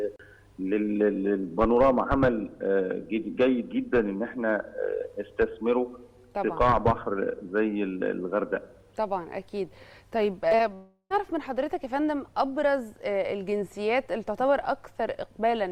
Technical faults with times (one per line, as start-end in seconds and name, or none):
10.48-10.60 short concealed packet loss
10.74-11.11 long network dropout